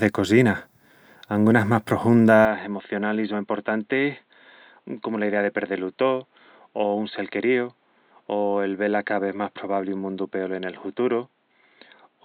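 The recording input was likely switched to a poorer device at 2.45 s, with no gap at the switch, and this speech stays on it to the end. From there nothing is heard above 4.3 kHz, so the voice turns dull and boxy, drops around 5 dB in level, and sits over a new, faint background noise.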